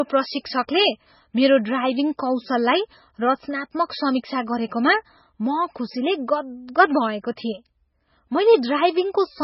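Watery, swirling speech runs from start to finish, with a dull top end and a chirpy, metallic edge on s sounds and smeared consonant onsets. There is nothing above 5.6 kHz. The damage is heavy and points to a very low bitrate, around 16 kbps, so MP3 compression is the likely cause: short of bits, the encoder cut the treble at a fixed point and kept switching weak frequency lines on and off between frames.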